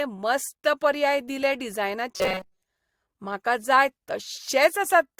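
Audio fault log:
2.17–2.62 s, robotic sound from repeated short buffers: the speech turns into a rigid metallic buzz near 188 Hz for most of this stretch, likely because audio arrived too slowly and a roughly 5 ms fragment was looped in place of the missing audio.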